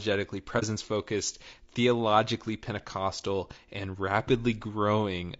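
Throughout, the speech sounds plainly rough and grainy, with noise between harmonics, which fits low-delay AAC compression, likely AAC-ELD at a bitrate around 32 kbps. From 0.59 to 0.64 s, just before "focused theologically", the sound fades into a brief dip. This is AAC frame loss with muting: roughly 30 ms of audio was lost and decoded as silence.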